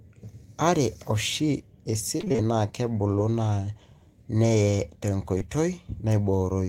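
From 2.17 to 2.40 s there is repeated packet loss with a robotic sound. Packets kept failing to arrive in time, so the receiver had to patch a run of short holes one after another. The longest hole was about 22 ms, and roughly half of this quarter-second stretch, around 110 ms, is synthesized continuation rather than real signal. Because the patches come so close together, the speech turns choppy and takes on a robotic edge.

At 5.38 to 5.42 s comes a short concealed packet loss. About 20 ms of data never reached the decoder, and the receiver bridged the hole with roughly 21 ms of audio extrapolated from the sound just before it, then blended back into the real signal. The result is a single brief smear or wobble in the speech, short enough that a passing consonant could be swallowed.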